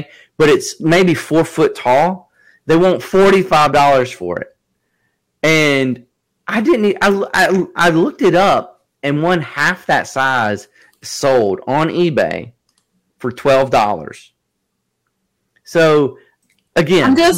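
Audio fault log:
Throughout, hard clipping: the speech is driven about 14 dB past full scale, so roughly 7 percent of samples are cut flat, giving harsh fuzz.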